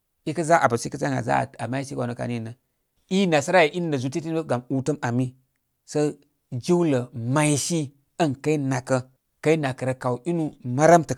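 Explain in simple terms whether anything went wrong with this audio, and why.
Nothing went wrong: the speech runs without a single audible technical fault.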